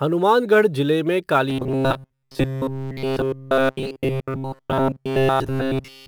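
From the start, a faint hiss and roughness ride on the speech, strongest on loud and bright sounds and gone in the pauses. This is sample clock jitter: the converter's clock wavers by a few microseconds, leaving errors roughly 35 dB below the signal.

From 1.50 s to the end, the speech turns into a rigid, metallic buzz at 133 Hz that only loosely tracks the talking. The likely cause is robotic sound from repeated short buffers, with nearly all of the audio being repeats of a segment about 7.5 ms long.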